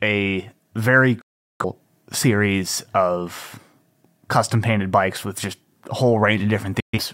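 At 1.21 s, right after "a very", a digital broadcast dropout mutes the speech with a fast fade of about 8 ms, leaving a 384 ms gap, which fits nine lost frames, until "series of". A shorter 128 ms hole follows at 6.80 to 6.99 s. Both appear as flat, empty waveform and blank vertical spectrogram bands.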